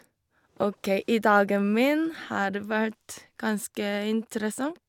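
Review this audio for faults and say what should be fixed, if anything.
Nothing stood out on listening to this speech recording, so there is nothing here that needs fixing.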